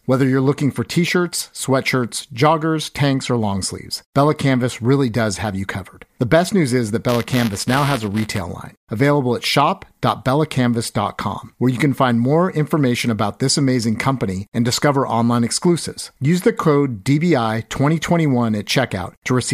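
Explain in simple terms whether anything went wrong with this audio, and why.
From 7.09 to 8.41 seconds the speech takes on a robotic buzz, a rapid rattle at 200 times per second, and it stops as soon as that stretch ends. This is buffer tearing. The software filling the playback buffer and the hardware reading it out fell out of step, so their positions crossed in every cycle. A small sliver of each cycle played back sound from about a hundredth of a second earlier, with abrupt joins on either side. The repeating 200-per-second rate fits a buffer cycle of 5 milliseconds.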